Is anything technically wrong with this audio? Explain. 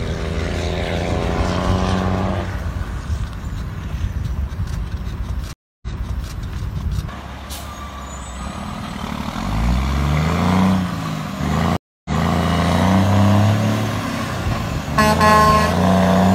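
Yes, there are two stream reconnects. At 5.53 to 6.33 s and 11.77 to 12.37 s the connection drops. After about 0.29 s of silence, a fresh decoder restarts the audio 0.51 s and 0.33 s earlier, so material repeats. A waveform shows flat gaps, then a soft onset and duplicated shapes.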